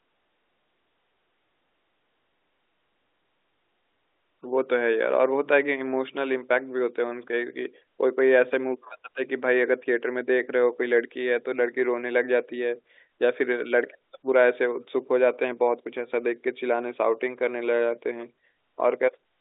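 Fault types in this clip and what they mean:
Nothing's wrong here; it's ordinary telephone-line speech, with the narrow band of normal G.711 coding and nothing added on top.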